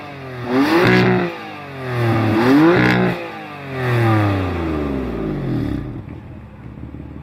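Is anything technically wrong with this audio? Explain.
No, nothing stood out as technically wrong on listening.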